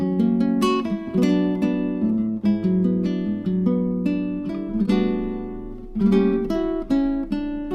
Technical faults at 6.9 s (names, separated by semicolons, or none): none